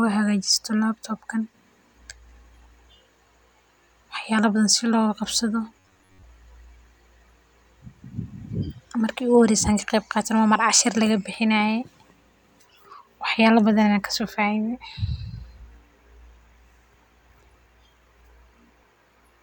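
From 5.79 to 6.24 s, audio likely arrived too seldom, so roughly 10.7 ms buffers repeated, causing robotic sound from repeated short buffers: a rigid, metallic 93.8 Hz buzz.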